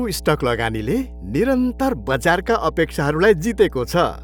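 From the first moment to the last, a steady mains hum sits under the speech: a low 60 Hz tone with some low harmonics above it, fairly loud and only modestly below the talker. Power-line current has leaked into the signal, through a ground loop or a nearby transformer. Unlike rumble or wind noise, it holds one fixed pitch and level and never wavers with the speech.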